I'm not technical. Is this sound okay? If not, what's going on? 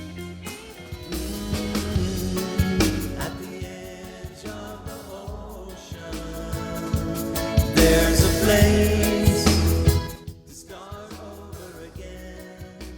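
No. From 9.98 to 10.33 s the volume drops sharply in coarse steps, about ten a second, and each step ticks, giving a brief zipping sound called zipper noise. This drop is jumpy and audibly clicks.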